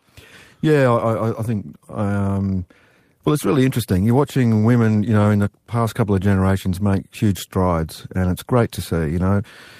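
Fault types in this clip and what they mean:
No technical faults can be heard in this speech recording; the signal runs continuously with nothing breaking into or disturbing it.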